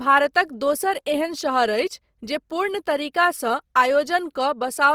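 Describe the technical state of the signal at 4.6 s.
At 4.6 s the speech carries the same plainly audible coding damage heard across the whole recording, most likely Opus compression in its music (CELT) mode. Bands that run short of bits are refilled with folded or noise content, so the voice sounds grainy and rough rather than swirly, at a rate that fits roughly 24 kbps. On a spectrogram the upper bands look noisy and smeared yet stay filled up to about 20.2 kHz, with few holes.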